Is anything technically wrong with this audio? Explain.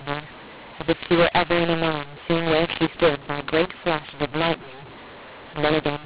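Yes. Throughout the speech, mu-law and A-law are mixed up: the audio was encoded as A-law but decoded as mu-law. The two logarithmic curves differ, so levels land wrong, loud parts turn harsh and distorted, and quiet samples rise above silence, filling pauses with hiss. Plain G.711 quantisation noise stays faint and follows the signal instead.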